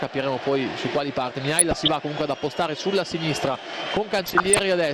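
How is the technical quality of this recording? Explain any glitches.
The technical quality is compromised: the whole recording has a dull, coded sound, and two short stretches break into burbling.

Throughout, the audio shows MP2 compression damage, most likely from MPEG Layer II coding at a low rate, around 80 kbps. The coder divides the spectrum into 32 sub-bands and rations bits among them. When bits run short, upper bands drop out and the remaining ones are quantised coarsely. The result is a muffled top end and a granular, gurgling texture that never lets up. That constancy sets it apart from the transient burbling described below.

DAB burbling appears from 1.59 to 1.88 s and again from 4.06 to 4.59 s. In both stretches, residual bit errors of a fraction of a percent have slipped past error correction into the MP2 data. The corrupted samples put short blips of noise into single sub-bands, and corrupted scale factors make individual sub-bands leap in level for up to a frame. 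Unlike the steady compression dullness, these bursts come and go, and the second one lasts longer.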